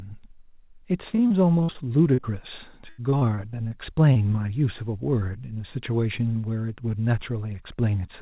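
From 1.1 to 1.86 s there's repeated packet loss (robotic sound): a run of short holes, the longest about 54 ms, each patched by stretching the previous sound, so the speech turns choppy, with pieces missing. Right after, at 2.14–2.21 s and 2.21–2.26 s, come two back-to-back short concealed packet losses, roughly 30 ms each, heard as a quick smear where the decoder bridged the gap. Repeated packet loss returns from 2.89 to 3.74 s, about a quarter of that stretch filled in and one gap near 86 ms, giving the same chopped texture. One last short concealed packet loss at 4.13–4.18 s leaves a brief wobble. Throughout, the call band stops at 4 kHz, which fits narrowband G.711.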